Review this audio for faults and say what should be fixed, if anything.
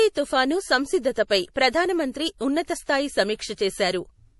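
The whole clip has a hard treble ceiling at about 11.5 kHz and a plainly audible watery, swirly quality on the speech. That points to likely MP3 compression at a low bitrate, something like 48 kbps: the encoder drops the top band and zeroes weak frequency lines that flicker frame to frame. To prevent it, keep a lossless or higher-bitrate copy and encode from that.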